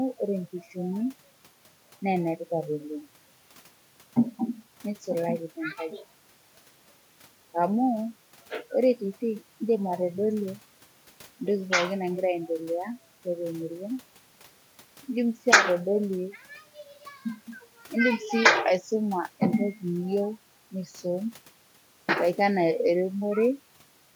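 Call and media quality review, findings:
No faults heard in this speech recording.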